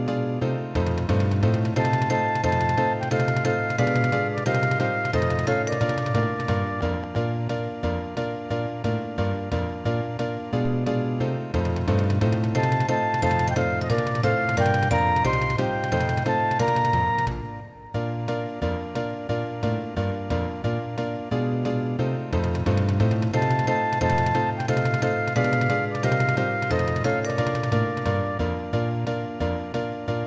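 From 6.18 to 7.16 s, a train of clicks, about seven per second at irregular spacing, ticks over the sound, likely interference. Each appears as a thin vertical line on a spectrogram, peaking a few dB above the signal. At 10.65 s, a DC step shifts the waveform's zero line, giving one low thump. The offset then decays away, like a 2 Hz high-pass, as a visible baseline drift beneath the band-limited content, which stops at 8 kHz.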